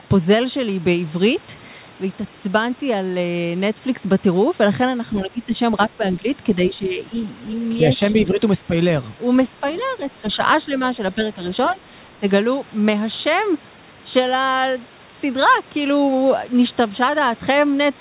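From 5.11 to 5.54 s, 5.88 to 7.01 s and 7.97 to 8.7 s, the speech is suppressed in double talk: the level dips and the sound breaks up in pieces, by up to about 15 dB, most likely because the echo canceller turned down the talker along with the far-end echo. At 9.7 to 9.85 s, the other side's voice leaks through as a faint scrap about 30 dB below the speech, likely echo the canceller failed to remove from the microphone. The same double-talk suppression returns at 10.21 to 10.71 s and 11.15 to 11.38 s as shallow dips, then as deeper brief cuts at 11.73 to 11.81 s and 12.19 to 12.25 s.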